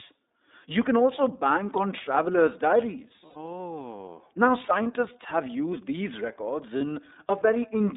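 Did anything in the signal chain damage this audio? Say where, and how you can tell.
Yes, two faults, both at the codec and network stages. Throughout the clip the speech has passed through the iLBC codec. The band runs only from about 250 Hz to 3.7 kHz, and the voice sounds rough and slightly synthetic. The codec codes each frame's excitation independently, and the coarseness points to the 30 ms, 13.33 kbps mode. On a spectrogram there is a hard ceiling near 3.7 kHz with nothing above it, a thinned low end below 250 Hz, and smeared harmonic detail.

Lost iLBC frames appear at 3.26–3.36 s, 4.83–4.87 s and 6.78–6.82 s. The first gap lasts about 90 ms, which fits three lost 30 ms frames. The other two fit single lost frames. The decoder fills each gap by repeating the last pitch cycle mixed with noise, so you hear a brief held, buzzy vowel that fades in the longer gap. The voice recovers almost immediately afterwards. 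On a waveform these spans show similar repeated periods, with a decaying envelope in the longer one. On a spectrogram they appear as flat, unchanging harmonic stripes.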